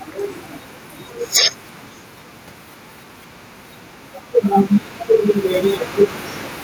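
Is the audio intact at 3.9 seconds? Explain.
No, gain pumping runs throughout, including 3.9 s: the gain swings by roughly 5 dB, pulling loud and soft parts closer in level and squashing the sound, likely from excessive microphone gain driving a fast limiter. On the waveform, peak levels look evened out.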